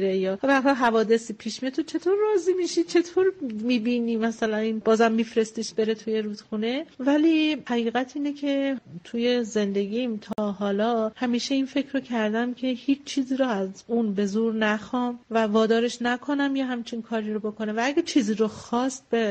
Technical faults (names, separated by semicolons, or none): gap at a join of encoded pieces